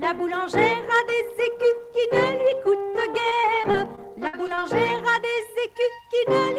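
From 3.29 to 4.61 s, repeated packet loss (robotic sound): eight short gaps, longest 59 ms, patched by extending prior audio, giving choppy fragments with pieces missing.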